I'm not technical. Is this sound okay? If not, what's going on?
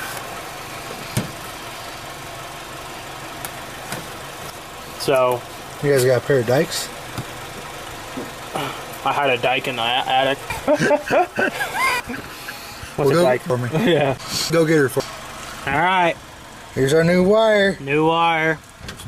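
No, there are chunks out of order: half-second pieces of sound play too late, at 4.5–5.5 s, 10.5–12.0 s and 13.5–15.0 s, so those moments sound jumbled.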